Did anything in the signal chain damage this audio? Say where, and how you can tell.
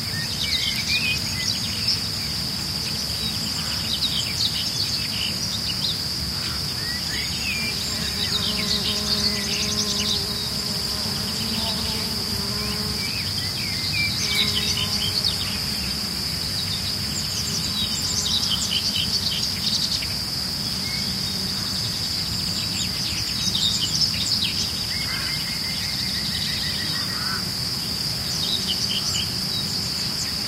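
No, nothing along the chain seems to have touched this recording of sounds, and there's nothing here that points to any stage going wrong.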